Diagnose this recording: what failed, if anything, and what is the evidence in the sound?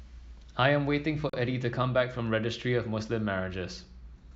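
A gap between stream segments opens at 1.30 s and lasts about 38 ms to 1.33 s, a hard-edged hole of silence in the speech. At the playback stage, the time stamps of two consecutive segments fail to meet, so the player inserts silence; no audio is lost.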